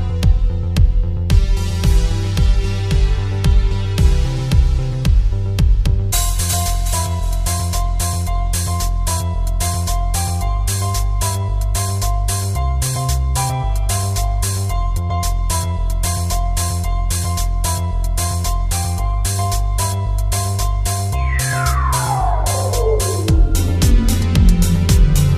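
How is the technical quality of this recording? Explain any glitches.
No glitches or faults heard.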